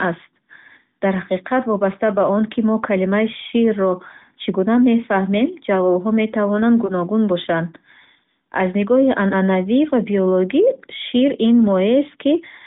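At 3.48 to 3.52 s, right after "он ки мо калимаи", there is a lost AMR speech frame. A radio error failed the frame's checksum. The decoder repeated the previous pitch and vocal tract settings at lower gain. The result is a brief dip or warble, consistent with one missing 20 ms frame. The same fault recurs at 6.86 to 6.92 s, after "гуна мефаҳмем ҷавобҳо метавонанд". The AMR narrowband sound is limited to about 150 Hz to 3.7 kHz.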